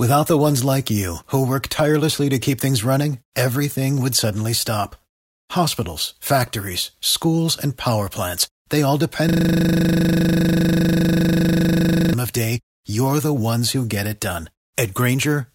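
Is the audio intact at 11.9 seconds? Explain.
No. At 11.9 seconds the speech has given way to a rapid, rattling buzz that pulses 25 times a second, running from 9.29 s to 12.14 s. This is a system hang loop: the computer or its audio driver stalled, and the sound hardware kept replaying the same 40 ms stretch of its ring buffer, dozens of times over, until the system recovered.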